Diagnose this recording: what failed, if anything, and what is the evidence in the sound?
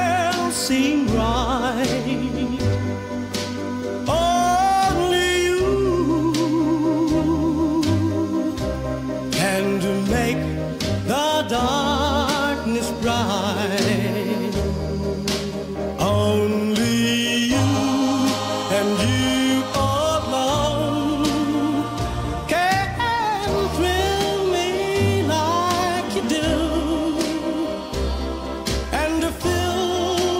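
Nothing failed here, and the sound gives no evidence of any fault at any stage.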